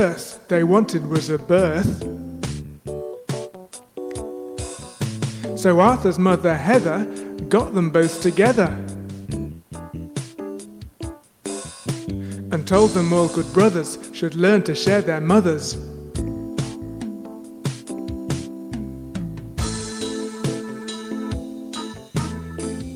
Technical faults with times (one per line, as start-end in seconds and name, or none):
none